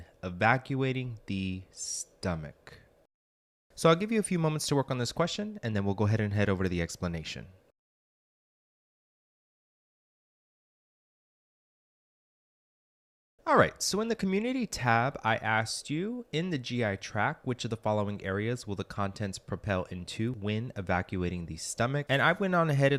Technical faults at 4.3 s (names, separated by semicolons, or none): none